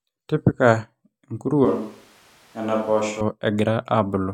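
From 1.65 to 3.21 s the speech abruptly turns hollow and about 5 dB quieter, likely a switch to a distant microphone. Its sudden edges set it apart from added reverb.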